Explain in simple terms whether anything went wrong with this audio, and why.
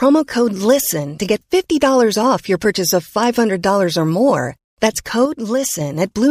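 A sudden gain jump, likely a volume setting switching instantly without easing, makes the speech and background abruptly drop quieter from 5.25 to 5.81 seconds.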